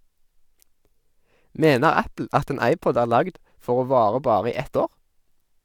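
Nothing here trips any alarm, as there's no technical fault to point to anywhere in this speech recording.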